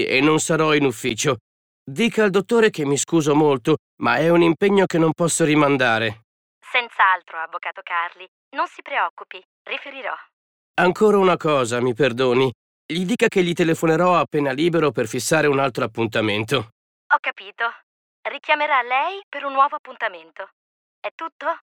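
At 1.09 s the audio drops out in a block of digital silence about 11.6 ms long. It cuts out and back with no fade, so it sounds like a tick. The length fits a 512-sample buffer that was not filled in time.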